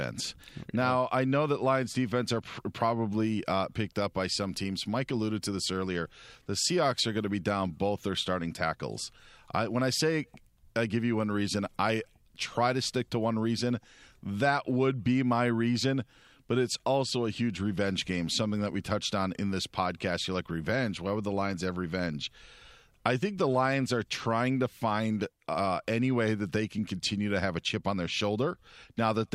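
No technical faults are audible.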